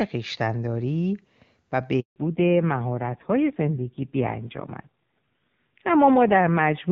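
At 2.00 s the speech cuts out in a handover gap lasting 160 ms, until 2.16 s. No speech frames reached the decoder while the call moved between networks, so the voice fades within a few tens of milliseconds into silence. The waveform shows a flat line and the spectrogram a blank vertical stripe.

From 2.16 s to the end there is a fallback to narrowband. The first two seconds carry full HD Voice, consistent with AMR-WB near its top rate. After the switch nothing remains above 4 kHz, and the voice sounds dull and rough, which fits a low-rate AMR-NB mode around 5.9 kbit/s. The spectrogram shows a sharp horizontal ceiling at 4 kHz.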